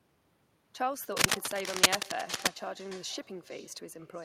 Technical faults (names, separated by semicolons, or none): echo with no canceller; cable scratch noise